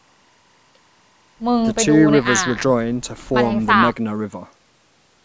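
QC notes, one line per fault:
0.00–2.84 s timecode bleed: faint chirping warble roughly 40 dB under the speech, code flipping near 1 and 2 kHz, fitting 23.976 fps linear timecode leaking across.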